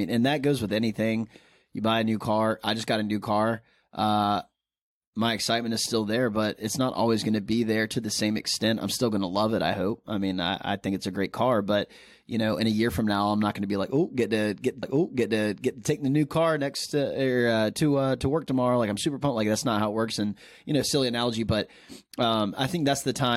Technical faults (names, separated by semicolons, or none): stream segment repeated